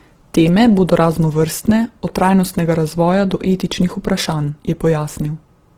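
Low-bitrate Opus compression, likely in its music (CELT) mode at full bandwidth, runs through this speech clip from start to finish. The sound points to a rate near 16 kbps. Starved bands are refilled with folded or noisy content, so the speech comes through plainly grainy and rough.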